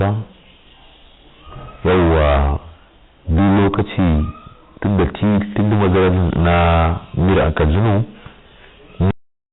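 A harsh, gritty fuzz rides on this speech recording from start to finish. Every louder syllable breaks up, because the peaks sit pressed against a ceiling. This is hard clipping from heavy overload, with the signal driven about 22 dB past what the chain could pass. At that level roughly a third of the waveform is sliced flat. Those squared-off tops spray harmonics high into the band, and the result is distortion on everything rather than occasional crackle. The recording also has a cut-off end: at 9.11 s the sound is chopped mid-utterance and drops straight into dead digital silence, with no decay or room tail. That points to the final stretch of audio never being written out, so the clip ends abruptly instead of fading. Through all of this the band stops near 4 kHz, which fits narrowband G.711 telephone coding.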